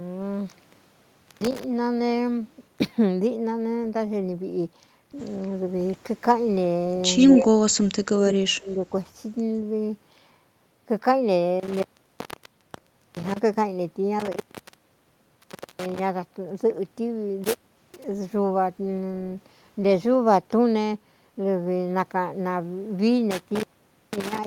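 Echo leak, 7.19 to 7.3 s: a faint, delayed copy of the speech arrives about 154 ms behind the original, sitting roughly 20 dB below it. The likely cause is a far end playing the call over a loudspeaker, where the echo canceller failed to strip out everything its microphone picked up and sent the remainder back down the line.

Speech suppressed in double talk, at 7.33 to 7.52 s, 7.69 to 7.74 s and 8.15 to 8.84 s: the speech dips and breaks up in pieces. The first dip is mild, around 10 dB. The second is a short, deep notch of about 30 dB. The longest stretch sinks by roughly 35 dB for about half a second. These drops likely come from both sides talking at once, which left the echo canceller unable to separate this talker from loudspeaker echo, so it attenuated both.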